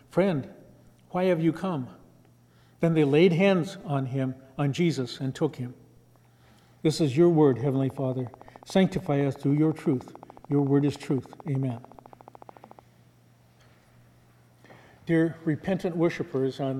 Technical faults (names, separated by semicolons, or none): train of clicks